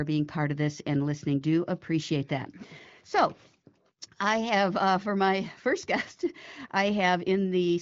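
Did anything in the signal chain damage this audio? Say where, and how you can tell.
No, nothing in this speech stood out on listening as damage from any stage of the signal chain.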